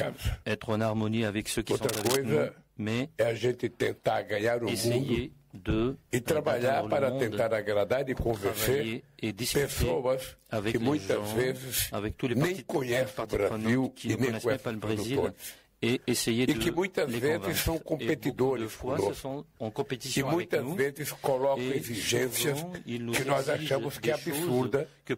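From 1.89 to 2.15 s, a dense, uneven scratching rides nearly as loud as the sound itself: cable scratch noise, likely from a worn connector or cable being moved.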